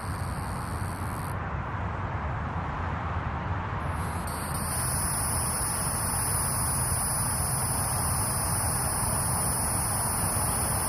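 No technical faults occur at any point in the clip, so there is nothing to describe in time order.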